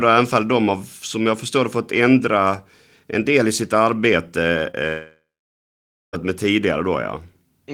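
At 4.71 to 4.75 s, right after "del i sitt arbete", a brief smear passes over the speech: short concealed packet loss, with a 20 ms gap bridged by extending the preceding sound. From 4.87 to 6.15 s the speech turns into a fading buzz or hiss, then about 0.9 s of near silence before it resumes. A long network dropout is the likely cause, with 1.26 s of audio never played.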